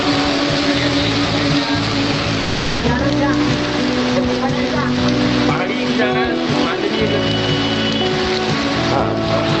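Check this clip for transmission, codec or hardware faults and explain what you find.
There's one fault worth flagging, a stretch of sound dropped by the voice detector. From 2.39 to 2.83 s, about 440 ms of sound vanishes into steady comfort noise. The sender's detector likely mistook it for background and stopped transmitting, with the receiver filling the gap until sending resumed. The call path's top end stops around 8 kHz, which fits Opus running near 32 kbps.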